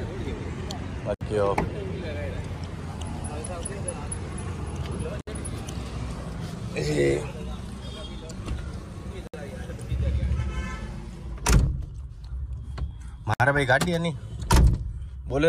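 At 1.14, 5.21, 9.27 and 13.34 s, a gap at a join of encoded pieces: 64 to 67 ms silences recur every 4 s, unlike random dropouts, from untrimmed encoder delay and padding.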